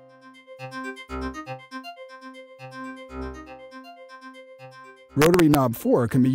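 Integer overflow strikes from 5.22 to 5.55 s, where the audio is driven about 2 dB past full scale and peaks that should have been limited wrap to the opposite sign. This gives violent cracks, shown on the waveform as sudden full-range sign flips and on the spectrogram as broadband vertical streaks.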